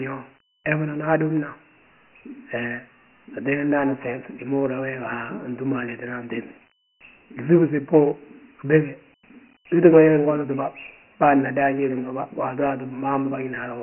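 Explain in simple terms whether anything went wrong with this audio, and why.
Throughout the speech, Dialogic VOX ADPCM squeezes the sound hard. Nothing above 3 kHz survives, so it sounds muffled, and a gritty hiss follows the speech.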